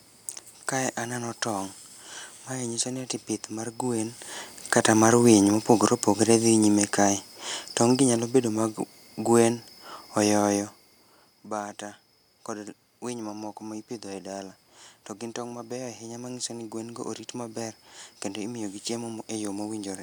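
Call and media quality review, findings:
Automatic gain falling, 4.57 to 7.3 s, just after "ati pith mar gwen". Level sinks about 4 dB over that span. Room noise drops along with the speech. Probable component: AGC in the capture path. Mechanism: input judged too loud or its background noise too strong, so gain was lowered gradually. Not the talker shifting around 3.5 s, which changes speech level but leaves background level unchanged.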